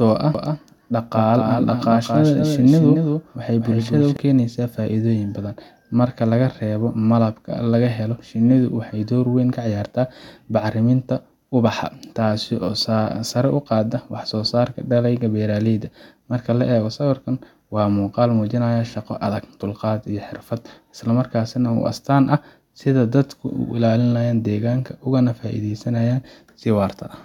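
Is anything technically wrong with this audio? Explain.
Yes. From 0.35 to 4.17 s, just before "keenaysaa faa’iidooyin badan", a doubled audio track appears, likely from a second, slower capture path. A dry copy about 5 dB quieter trails the speech by about a fifth of a second, then cuts out abruptly.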